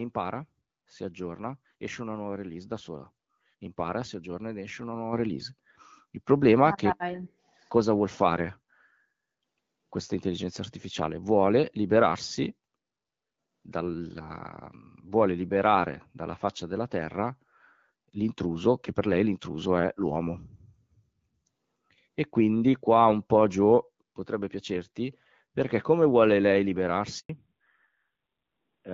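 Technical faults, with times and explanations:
5.13 s, microphone volume stepped up: voice and background jump together by about 6 dB in one step, as the call software raises a mic input it judged too quiet.
27.19 to 27.29 s, handover gap: a 100 ms silence where the call switches networks and no speech frames arrive, so whatever was said there is simply gone.
27.29 s to the end, fallback to narrowband: after the handover the call drops from HD Voice at 12.65 kbit/s to narrowband at 7.4 kbit/s, so nothing above 4 kHz survives and the voice turns duller and rougher.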